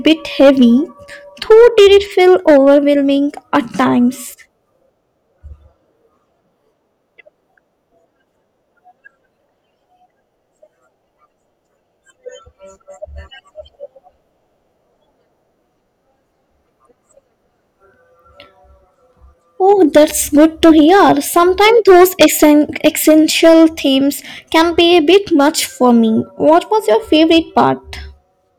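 A stage overloads and cuts the speech peaks flat: hard clipping at 0.06–0.65 s (about 7 dB over), 1.51–2.89 s (about 6 dB), 19.69–23.65 s (about 12 dB, a harsh fuzz), 24.55–25.49 s (about 7 dB), 25.84–25.91 s (about 1 dB) and 26.47–27.69 s (about 3 dB), heard as crackle on the louder syllables.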